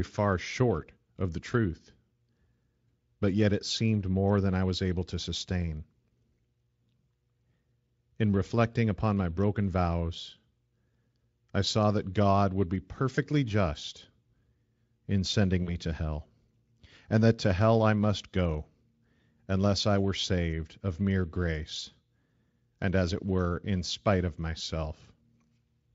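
Speech clip with VoIP packet loss concealed by the speech codec at 13.15 to 13.19 s, after "would be", and at 15.63 to 15.78 s, between "in sending" and "to hell". The decoder extrapolates from its last pitch and filter state, giving a brief buzzy or noisy, fading smear. The gaps fit one and two lost 20 ms frames. The second disturbance outlasts its 40 ms gap while the predictor recovers. Outside these dropouts the Speex coding shows faint or no damage, which points to a high-quality setting.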